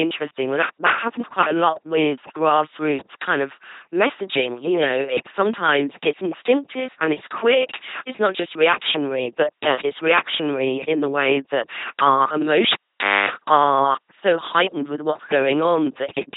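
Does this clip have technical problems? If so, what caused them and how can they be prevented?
Yes. Throughout, the speech passes through an LPC-10 vocoder at 2.4 kbit/s. Each frame is synthesised from a ten-pole filter excited by either a pulse train or noise, giving a heavily buzzy, robotic voice with nothing above about 3.8 kHz. Prevent it by using a modern wideband codec at adequate bitrate.

From 12.72 to 13.30 s, between "way that our" and "are so heightened with", the cable was pulled and plugged in. A pop opens roughly 0.53 s of dropout, including a 0.26 s burst of 50 Hz mains buzz while only the tip made contact, then a second pop. Prevent it by muting the channel before reconnecting and using locking connectors.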